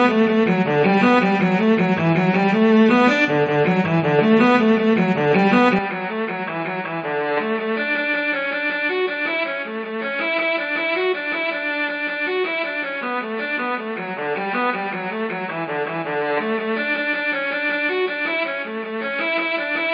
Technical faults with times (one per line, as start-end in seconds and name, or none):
5.79-19.94 input switched to a poorer device